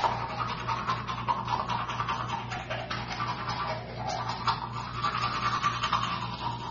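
From start to finish the sound is dull and smeared, with nothing above about 6.9 kHz and a fizzy warble, likely AAC compression at a low bitrate near 24 kbps.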